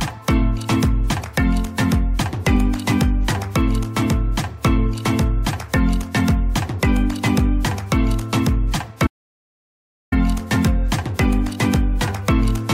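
The audio has one audio dropout to silence, running from 9.07 s to 10.12 s. The signal cuts off abruptly and returns just as abruptly, and the roughly 1.05 s gap between is silence with no room tone or noise floor underneath. Whatever sounded in that second is lost. The likely cause is a brief loss of input, such as a disconnected device, a failed link or an accidental mute, while the recorder kept writing silence.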